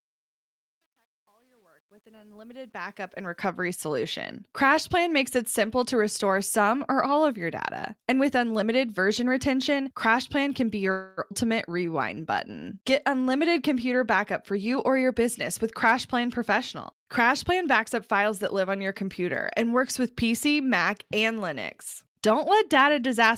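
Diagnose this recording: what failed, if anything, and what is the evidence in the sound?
Truncation distortion on a fade, sample-format or gain stage: the fade-in from 0.0 to 3.4 s turns gritty, worst up to 2.61 s. This fits undithered 10-bit truncation.

Call audio freeze, network: from 10.91 to 11.20 s the last sound is held and fades for 259 ms, then resumes intact. This is likely a jitter buffer starved by delayed packets.

Skip ahead, network or jitter buffer: around 11.29 to 11.33 s playback jumps forward, with about 150 ms of audio gone and the two sides joined almost directly.

Jitter buffer slow-down, call processing: from 11.72 to 13.24 s the audio plays at 91% speed with unchanged pitch. Repeated pitch periods add 146 ms to rebuild the reserve.

Jitter buffer speed-up, call processing: from 14.51 to 15.21 s the audio runs at 120% speed, then 104% from 15.64 to 18.23 s. Pitch periods are removed, roughly 150 ms and 100 ms.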